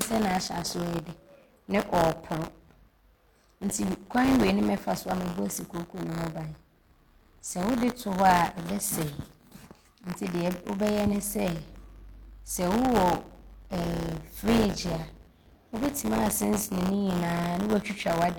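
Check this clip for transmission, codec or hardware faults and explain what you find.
Buffer tearing runs through the whole speech clip. It is a steady robotic buzz at 100 Hz that appears only while there is signal. The writer and the hardware reader of the ring buffer have slipped so that they cross inside every period. About a twentieth of each period therefore carries audio from the previous lap, roughly 20 ms old, joined hard on both sides. The 100 Hz rate points to a buffer period of about 10 ms.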